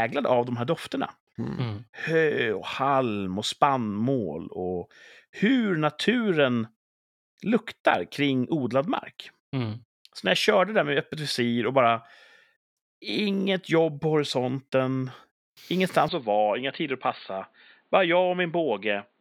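From 16.09 s the speech turns dull, likely an input switched to a poorer device; on a spectrogram everything above 4.6 kHz disappears, with no gap.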